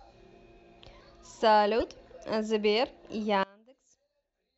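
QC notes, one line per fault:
1.80–1.83 s, corrupt frame decoded: a short glitch cuts across the speech. Bit errors in a couple of compressed frames went to the decoder, which misread gains and codes and scattered energy across the wrong frequencies, peaking around -25 dBFS.
3.43 s to the end, one channel inverted: the speech drops by about 28 dB, leaving a faint residue. Likely cause is one channel playing with reversed polarity, so the centred voice, common to both sides, cancels when the channels sum to mono.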